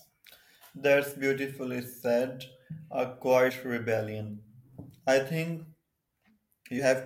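At 3.49 to 3.51 s and again at 6.78 s the speech jumps forward, a case of compressed frames skipped. Each time a couple of frames of the coded stream never reach the output, so about 50 ms of audio is lost. A spectrogram shows harmonic tracks jumping abruptly, and the waveform shows a discontinuous envelope.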